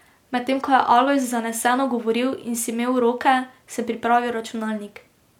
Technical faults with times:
none

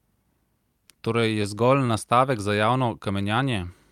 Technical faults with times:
0.88-1.90 repeated stalls (stutter)

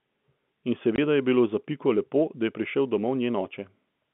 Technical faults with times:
0.96-0.98 packet loss filled with silence

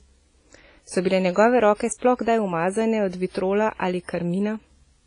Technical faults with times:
0.00-5.07 WMA compression

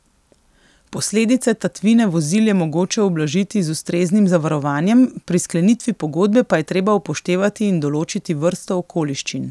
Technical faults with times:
none

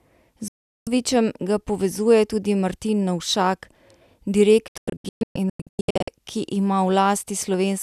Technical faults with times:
0.48-0.87 digital broadcast dropout
4.68-6.08 digital broadcast dropout

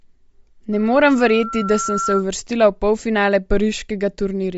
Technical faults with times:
0.00-4.57 Bluetooth LC3 compression
0.72-2.25 loudspeaker feedback squeal

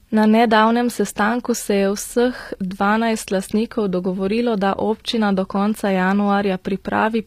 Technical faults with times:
0.00-7.26 HE-AAC compression

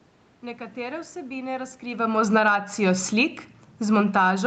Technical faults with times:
1.91-4.42 automatic gain falling
2.53-3.07 automatic gain rising

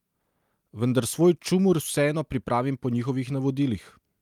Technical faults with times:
none

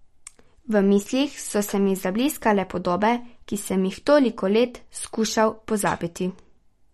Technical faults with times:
0.00-6.94 MP3 compression

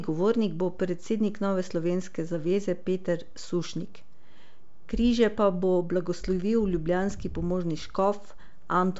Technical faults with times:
0.00-9.00 DC offset

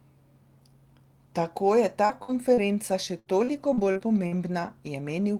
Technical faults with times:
2.05-2.12 short concealed packet loss
2.09-2.30 lost packet rebuilt from error correction
2.23-2.31 burst of packet loss
2.54-2.60 short concealed packet loss
2.57-2.59 lost packet rebuilt from error correction
3.19-4.33 repeated packet loss (robotic sound)

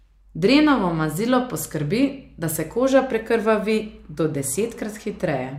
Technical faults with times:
none

